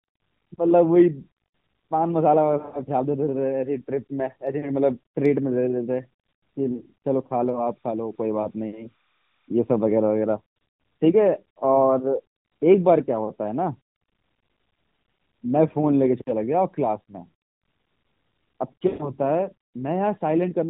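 Lost AMR speech frames at 2.58 to 2.86 s, 6.72 to 6.83 s and 18.88 to 19.12 s: the decoder repeats the last good settings with falling gain, so the speech smears, briefly fades, then returns rough.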